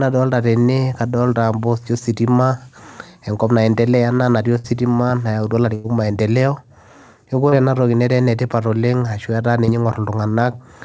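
Burst of packet loss at 4.58 to 4.67 s and again at 5.75 to 5.87 s: consecutive packets failed to arrive in time, so the receiver stretched the last sound into a fading buzz or hiss. About 60 ms and then 90 ms of speech are skipped before playback resumes further on.

Short concealed packet loss at 7.49 to 7.55 s and 9.65 to 9.71 s: roughly 30 ms went missing each time, and the decoder patched the hole by extrapolating the preceding sound, heard as a brief smear or wobble within speech that has nothing above 8 kHz.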